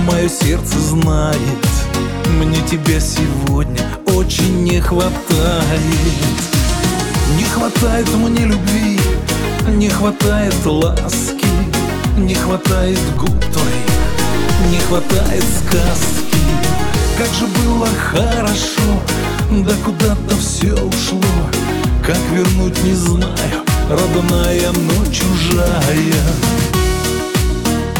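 The audio carries a DC step from 13.17 s to 16.97 s. At 13.17 s the waveform's zero line jumps to an offset of about -16 dBFS, producing a low thump as the baseline shifts. By 16.97 s the offset is gone. The program material rides on the displaced baseline unchanged, pointing to a converter recalibrating or an offset-carrying input being switched into the signal path.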